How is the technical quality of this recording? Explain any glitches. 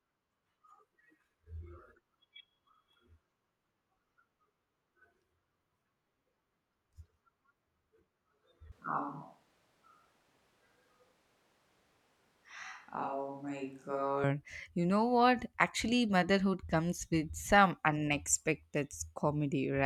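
The recording has one clear glitch, a switch to a distant microphone, from 8.72 s to 14.24 s. The speech abruptly turns roomy and hollow, thinner in the bass, roughly 5 dB quieter, with room noise rising to about 35 dB below the speech. The likely cause is that the close microphone dropped out and a farther one, picking up more reflections, took over. On a waveform, the envelope steps down and back up sharply at both edges. On a spectrogram, the low end thins while reverberant tails smear between syllables.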